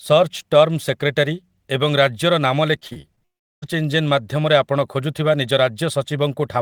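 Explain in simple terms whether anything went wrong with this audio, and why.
Between 2.79 and 3.23 s the speech turns choppy and robotic. This is repeated packet loss: six separate gaps, the longest 36 ms, each patched by stretching the preceding sound. About a third of that stretch is filler rather than real audio.

Right after, from 3.25 to 3.64 s, the sound drops out almost entirely for roughly 0.38 s, then resumes with that portion simply missing. The likely cause is a long network dropout, where no audio arrived and nothing could be recovered.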